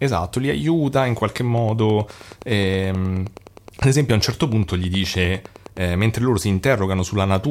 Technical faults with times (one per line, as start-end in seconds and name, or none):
1.58-5.78 train of clicks